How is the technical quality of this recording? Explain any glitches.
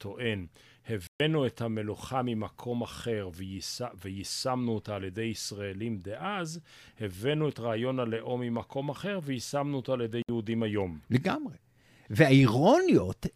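Two brief digital broadcast dropouts interrupt the speech. At 1.07 to 1.20 s and 10.22 to 10.29 s, the receiver muted on corrupted frames, leaving silent gaps of 128 ms and 64 ms that show as flat waveform and blank spectrogram columns.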